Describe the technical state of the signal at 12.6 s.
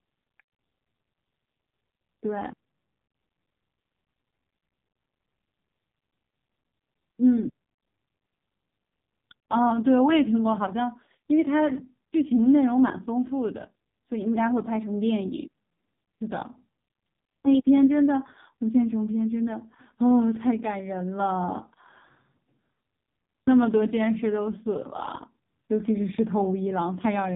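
At 12.6 s you're hearing AMR narrowband mobile codec damage, and it runs the whole clip. The speech has been squeezed through a vocal-tract model rebuilt from a handful of pulses per 5 ms slice of each 20 ms frame, so it comes out buzzy and synthetic. The damage is heavy, which points to one of the lowest AMR-NB bitrates, around 5.15 kbps. Everything above 3.8 kHz is gone, leaving that thin phone-line sound.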